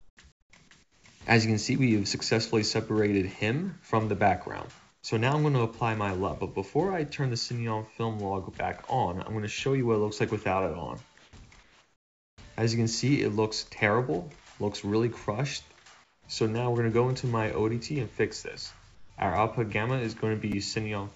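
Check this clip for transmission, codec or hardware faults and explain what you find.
Two faults are audible: the background is repeatedly swapped for comfort noise, and two tiny chunks play out of order. The audio also stops at 8 kHz, as expected of a G.722 call path.

Comfort noise in place of the background occurs at 0.00–0.17 s, 0.32–0.53 s, 0.83–1.04 s, 4.91–5.03 s, 11.18–11.33 s, 11.63–12.38 s (the longest, 750 ms), 16.04–16.25 s and 18.95–19.10 s. In each gap the real background gives way to a steady, featureless hiss, mostly quieter, from about 5 to about 17 dB down, though at 11.18 s it is about 1 dB louder. This is likely discontinuous transmission, with the receiver synthesising noise while the sender is idle. Unlike a noise gate, the pauses are filled with even noise rather than silence.

Chunks out of order occur at 1.26 s and 20.52 s. Each time, a 5.8 ms slice arrives one chunk late and plays after the slice that should follow it, leaving three hard joins that come across as a brief jumble. 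Nothing is missing. That sets it apart from packet loss or concealment, where audio is dropped or smeared over.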